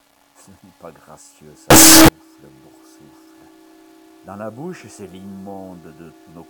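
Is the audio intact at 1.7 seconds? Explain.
No. From 1.70 s to 2.08 s the sound collapses into very loud, harsh distortion, with quiet stretches pushed up as loud as everything else. The likely cause is a signed and unsigned mix-up on these 8-bit samples: reading them with the wrong sign convention flips the top bit, so each zero crossing becomes a jump across the full range. The result is a dense, clipped-sounding rasp until 2.08 s.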